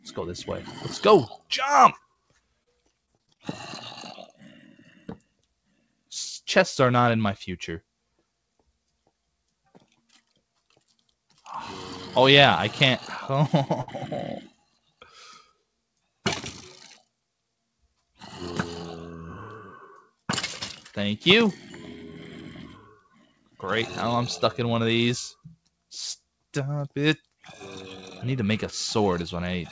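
Sound cut by the noise suppressor at 1.35 to 1.51 s: the suppressor mistook this sound for noise and pulled it down by up to about 17 dB, so it sinks briefly in level.

Short concealed packet loss at 2.63 to 2.68 s: about 20 ms never arrived, and the receiver filled 27 ms by continuing the previous sound, leaving a brief smear.

Repeated packet loss (robotic sound) at 3.06 to 3.41 s: five separate gaps, the longest 27 ms, were patched one after another, covering about a quarter of the stretch and giving choppy sound.

The noise suppressor cuts the sound again at 4.78 to 5.44 s, by up to about 15 dB, with steady or fading parts sinking and decays ending early.

Short stall from a late packet at 13.81 to 13.90 s: the jitter buffer ran dry, so the receiver held the last sound for 64 ms until the packet arrived, with nothing lost.

Further suppressor cuts follow at 14.48 to 15.16 s (up to about 16 dB), 22.94 to 23.62 s (about 18 dB, the longest stretch, well over half a second) and 25.35 to 25.69 s (about 18 dB).

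Throughout, the audio has nothing above 8 kHz, which fits a G.722 call codec.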